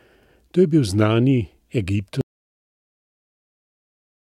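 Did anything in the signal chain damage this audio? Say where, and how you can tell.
Yes. An audio dropout to silence begins at 2.21 s and runs to the end of the clip. The speech stops mid-flow, and the gap is silent with no room tone. The likely cause is a lost input link or a mute ahead of the recorder.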